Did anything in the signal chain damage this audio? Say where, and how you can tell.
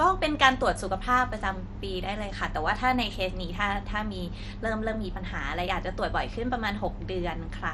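Yes. At the codec stage, the whole clip is likely MPEG Layer II (MP2) compression, which fits a rate near 64 kbps. Nothing remains above 13.5 kHz, and the speech sounds dull, with audible gurgling, granular distortion as sub-bands drop out and the remaining ones are coarsely quantised.

At 6.85 s there is a DC step, a converter-stage fault where the waveform's zero line suddenly jumps. It is heard as a brief low thump while the speech carries on, and the offset then decays away as a 5 Hz high-pass filter pulls it back toward zero.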